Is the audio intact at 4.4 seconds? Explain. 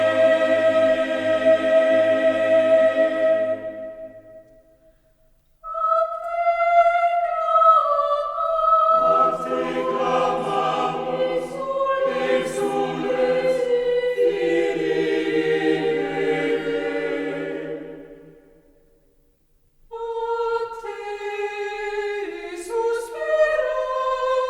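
Yes, at 4.4 seconds the audio is intact, with no dropout, click, distortion or other fault audible at that moment.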